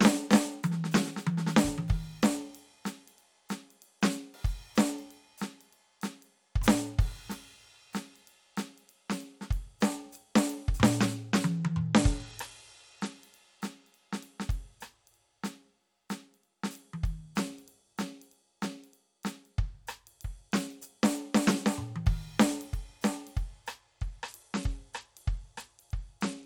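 From 11.57 to 13.16 s and again from 24.0 s to the end, the music dulls and turns gritty, a Bluetooth SBC bit pool drop. The sound fits a fall from bit pool 31 to 12, near 88 kbps. Unlike dropouts, it never goes silent.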